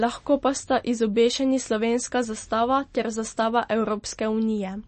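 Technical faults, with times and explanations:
Throughout, MP3 compression, likely at a low bitrate: the encoder has cut the treble at a fixed frequency, leaving nothing above 8.3 kHz, and, running short of bits, discarded weaker frequency components that flicker on and off between frames. The speech therefore sounds dull and muffled, with a plainly audible watery, swirling texture, and the band limit and damage fit a 32 kbps encode.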